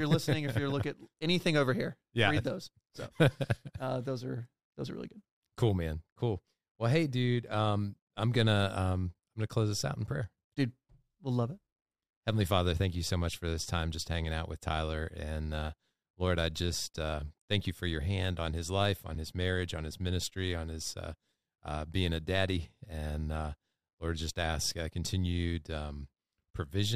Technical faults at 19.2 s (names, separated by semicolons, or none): gap between chunks